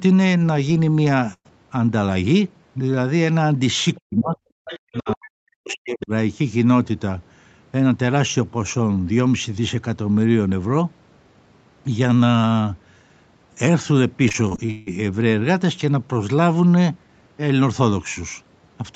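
Speech on a call path, with audio topping out near 8 kHz, carries several faults. At 1.33–1.47 s a burst of packet loss leaves a single held, fading patch of about 110 ms and skips roughly 120 ms of speech; one gap, not a chopped run. The other side's voice leaking through appears faintly at 3.95–4.00 s and 6.01–6.06 s (about 30 dB down) and more clearly at 4.65–5.15 s (about 10 dB down), likely uncancelled loudspeaker echo, which adds a second voice rather than removing the main one. Speech suppressed in double talk follows at 4.02–4.37 s and 4.86–6.11 s, where the talker dips by up to roughly 40 dB, likely the echo canceller ducking during overlap, unlike a network dropout. From 14.29 to 14.94 s repeated packet loss turns the sound robotic: seven gaps, the longest 159 ms, conceal nearly half the span, giving steady choppiness instead of one isolated hole.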